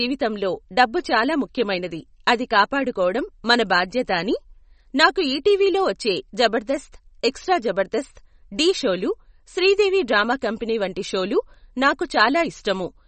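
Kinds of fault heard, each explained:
MP3 compression: watery, swirly speech with nothing above about 8.4 kHz, likely from low-bitrate MP3 encoding, which fits roughly 34 kbps, cutting treble and dropping weak detail.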